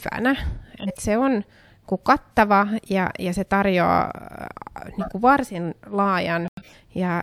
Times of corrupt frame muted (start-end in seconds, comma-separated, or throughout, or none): 6.45-6.73